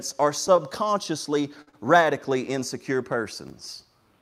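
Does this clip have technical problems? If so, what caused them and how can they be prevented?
Yes. The speech briefly hangs with a faint buzz or dip at 0.56–0.60 s, 1.62–1.69 s and 1.69–1.75 s. These are short stalls from a late packet: the jitter buffer ran dry, and the last sound was stretched by 17, 54 and 39 ms until the data arrived, with nothing lost. A deeper or adaptive jitter buffer on a steadier network would prevent this.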